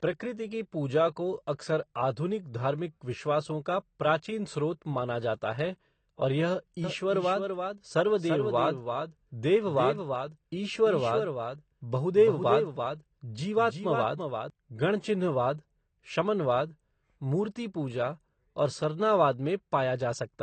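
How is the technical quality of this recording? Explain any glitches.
The recording has clear technical faults: codec damage throughout and a doubled passage in the middle.

Throughout, likely AAC compression at a low bitrate, perhaps around 32 kbps, dulls and smears the speech with a warbling, fizzy texture. A spectrogram shows nothing above 8.6 kHz.

From 6.84 to 14.5 s, a doubled audio track adds a dry, full-band copy about 300 ms late and about 5 dB quieter, starting and stopping abruptly. The waveform shows a repeated, offset envelope.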